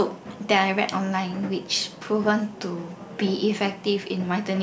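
No technical faults are audible.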